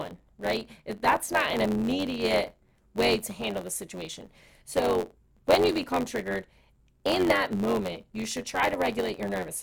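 From start to end the speech carries a steady buzz at 91.9 Hz and plays 1.07 times faster while keeping close to its normal pitch. This is a block size mismatch (truncated). Each written block, which fits 512 samples, loses its tail before the next stage reads it.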